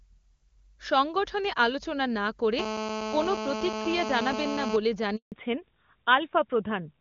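From 2.59 to 4.76 s a hard, raspy GSM phone buzz sits under the speech at about 5 dB below it. A 2G handset nearby is transmitting in bursts 217 times a second, and the audio circuitry rectifies each radio pulse into a click, so the buzz carries a dense stack of harmonics. Mains hum would sit at 50 or 60 Hz and sound smoother. This buzz holds steady throughout, which fits a phone in a call rather than one moving data.

At 5.16 s a handover gap cuts in. The speech dies away over a few tens of milliseconds, and then nothing is heard for 160 ms, until 5.32 s, while the call is passed from one network to another and no speech frames arrive. Whatever was said in that window is simply missing. Unlike a dropout from packet loss, there is no concealment smear or repeated fragment, only clean silence before the new link comes up.

From 5.32 s to the end, the call falls back to narrowband. Before this point the HD Voice path, AMR-WB at a rate consistent with its top 23.85 kbit/s mode, kept the upper band open. 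Now nothing above 4 kHz remains, which points to AMR-NB at around 12.2 kbit/s. The sound turns duller and rougher. A plain low-pass filter would dull it but not add that rough codec texture.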